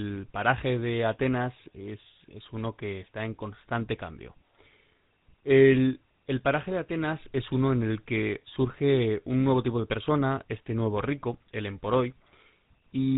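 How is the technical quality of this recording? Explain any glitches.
The recording has one clear problem, and it runs the whole way through: GSM full-rate codec damage, plainly audible. That old phone codec models the vocal tract and feeds it a sparse, regularly spaced pulse excitation, keeping only every third sample of that excitation, consistent with a 13 kbps stream. Nothing above 4 kHz survives, so the speech sounds muffled, with a buzzy, gravelly roughness.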